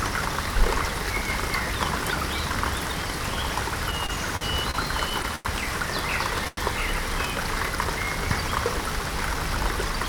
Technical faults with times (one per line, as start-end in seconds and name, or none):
3.91-5.47 repeated stalls (stutter)
6.47-6.59 short stall from a late packet